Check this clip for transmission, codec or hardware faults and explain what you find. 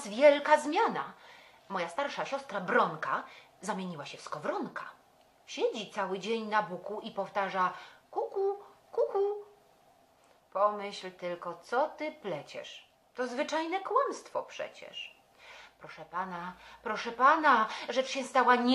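No transmission, codec or hardware faults.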